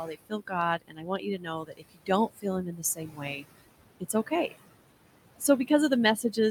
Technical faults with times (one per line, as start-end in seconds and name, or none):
0.00-6.50 noise suppressor artifacts
0.00-3.46 speech cut by the noise suppressor
4.00-4.32 speech cut by the noise suppressor